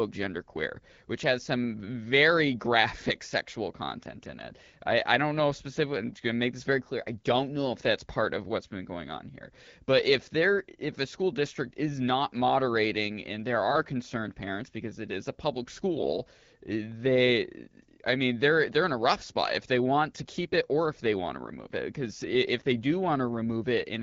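A speech clip carried over AMR-WB (HD Voice) at 12.65 kbit/s, whose band stops near 7 kHz. Just after "it is a public", from 15.96 to 16.11 s, AMR bit errors turn the sound hoarse and gargly while pitch and level roughly hold. The 0.14 s burst fits about seven 20 ms frames. A few percent of their weakly protected bits were flipped, so the excitation pulses and the fine gain and spectral values were decoded wrongly. On a spectrogram the harmonics smear into ragged, noisy frame-sized blocks, and the waveform shows jagged, irregular cycles.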